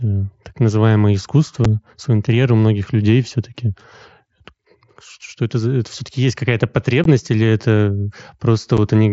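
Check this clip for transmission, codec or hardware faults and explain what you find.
Three short dropouts come from unconcealed Bluetooth headset packet loss, at 1.65 s (after "так называемое", before "в свой интерьер у"), 7.04 s (before "или это") and 8.77 s. Lost headset-to-phone packets were replaced by silence or an idle pattern, leaving abrupt holes of about 7.5 ms, 15 ms and 7.5 ms in the speech, carried over the wideband mSBC link.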